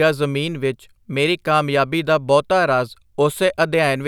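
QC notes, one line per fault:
No faults heard in this speech clip.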